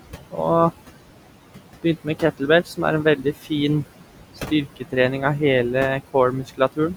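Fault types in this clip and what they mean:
noise suppressor artifacts: The suppressor decides band by band, frame by frame, what counts as steady noise and pulls it down by about 17 dB, so the room noise sinks in pauses and swells back under the speech.
speech cut by the noise suppressor: The suppressor mistakes parts of the speech itself for noise and lowers them with the background, by up to about 19 dB, so brief stretches at 0.04–0.39, 3.41–3.52, 4.36–4.95 and 6.32–6.6 s sound swallowed and faint.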